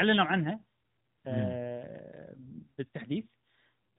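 No faults found in the speech; the AMR narrowband mobile codec path runs at 12.2 kbps with its expected band limit, nothing above 3.9 kHz.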